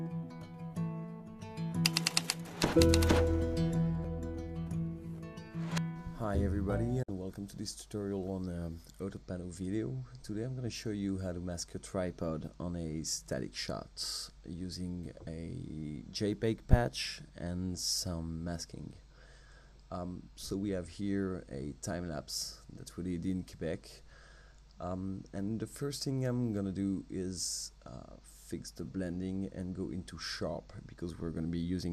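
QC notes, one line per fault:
7.03–7.09 s, digital broadcast dropout: sound fades out over about 8 ms and mutes briefly, consistent with roughly two lost frames; the missing audio doesn't return.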